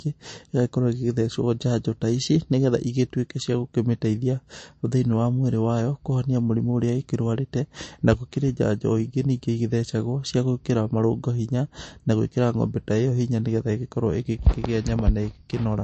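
MP3 compression artefacts run through the whole speech clip, from start to finish, and are plainly audible. Nothing is present above 8.3 kHz, so the treble is cut off sharply. The sound is watery and swirly, which fits a low bitrate of around 36 kbps. The likely cause is an MP3 encoder short of bits: it stops coding the top of the spectrum at a fixed frequency and drops weak frequency lines that switch on and off between frames.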